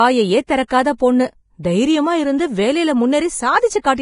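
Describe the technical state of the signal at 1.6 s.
Right around 1.63 s there's a short burst of pre-echo, a smear of hiss about 16 ms long sitting just ahead of a sharp onset in the speech. A transform codec spreads its quantisation noise across a whole block, so when a hard attack lands late in one, the noise sized for that loud moment spills into the quiet stretch before it. The result is a soft, smeared attack with a little fizz leading in.

That moment also carries the grainy, hissy texture that runs through the whole clip, most likely from heavy Vorbis compression. Nothing gets through above 10.5 kHz, and the treble that remains has been quantised so coarsely that fine detail turns into noise-like grit. That roughens the tone and dulls edges, which fits a very low bitrate. It's also what sets up the pre-echo at 1.63 s.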